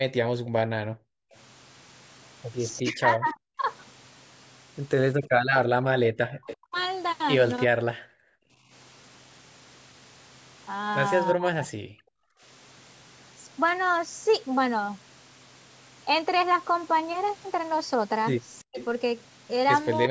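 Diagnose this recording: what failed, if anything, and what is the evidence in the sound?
The room background is gated by the echo canceller in the call processing stage, from 0.34 to 1.31 s and again from 8.16 to 8.71 s. The ambience drops by about 40 dB, for roughly 0.7 s in the first window and half a second in the second. While far-end audio was playing through the loudspeaker, the canceller's suppressor clamped the microphone path, muting room noise along with any echo, then released it.

Echo leak appears as a delayed copy of the speech, trailing it by 344 ms, from 0.45 to 3.32 s, 6.5 to 6.83 s, and 18.78 to 20.09 s. It starts far down, around 25 dB below the speech, rises to about 15 dB below at 6.5 s and reaches about 10 dB below near the end. The likely cause is a far-end loudspeaker path whose echo canceller failed to fully cancel the coupled sound, so the residual was transmitted back.

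Speech is suppressed in double talk, again at the call processing stage, between 2.81 and 7.88 s, 11.34 and 12.15 s, and 18.61 s to the end. The talker's level falls by around 40 dB in pieces, totalling roughly 1.5 s, 0.7 s and 0.2 s respectively. Both parties were likely talking at once, and the canceller could not separate near-end speech from loudspeaker echo, so it attenuated everything. The overlap with the echo leak at the end is consistent with this.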